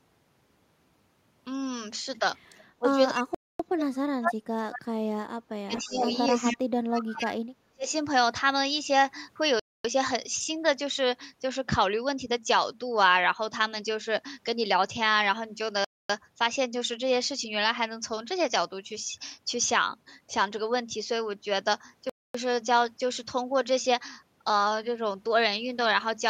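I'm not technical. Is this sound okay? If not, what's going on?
No. There are three problems. Echo leak: at 2.55 s, 5.73 to 6.18 s and 6.35 to 6.57 s, a copy of the speech returns about a quarter second late, faint at first, then as loud as the original. It is likely from a loudspeaker on the far end. Speech suppressed in double talk: from 2.79 to 2.89 s, 3.1 to 6.09 s and 6.57 to 7.86 s the speech dips sharply or nearly vanishes, likely because the echo canceller also muted the talker. Gap between chunks: quarter-second silences fall at 3.35, 9.6, 15.85 and 22.1 s, once every six seconds, where stored pieces of audio were joined.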